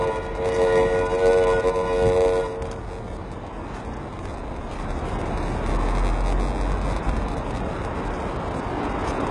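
A recording of everyday sounds with a block size mismatch (padded) throughout: a steady buzz at 93.8 Hz, which fits a 512-sample read block padded with zeros, and playback slowed to 0.938 speed at unchanged pitch. The treble is heavily damaged and nothing is present above 11.3 kHz, with gritty, metallic upper content that does not line up with the lower harmonics. This is likely HE-AAC compression at a very low bitrate, around 12 kbps, rebuilding the top band by spectral band replication.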